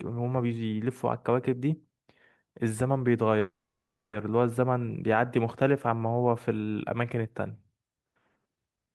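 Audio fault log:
3.39 to 4.15 s, call audio freeze: the speech stops on a short fading buzz or hiss from its last sound, then about 620 ms of silence, and resumes exactly where it left off with nothing skipped. The likely cause is packets held up in transit until the jitter buffer ran dry; the receiver stretched the last sound, waited about 740 ms in all, and everything after the freeze now arrives 740 ms late.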